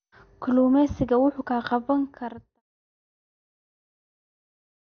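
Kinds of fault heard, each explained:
MP2 compression: The speech sounds dull and gurgly the whole way through, with a granular roughness sitting on it, and there's nothing at all above 6.5 kHz. That's likely MPEG Layer II running short of bits. It splits the signal into 32 sub-bands, switches the upper ones off entirely and quantises what's left coarsely, which fits a low rate around 48 kbps. The speech then fades out smoothly, ending at about 2.6 s.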